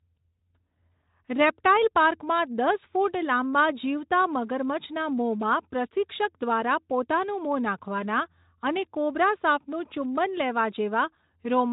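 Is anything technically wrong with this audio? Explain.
No, nothing is technically wrong with this speech. It carries the light character of Speex coding, with nothing above about 3.8 kHz.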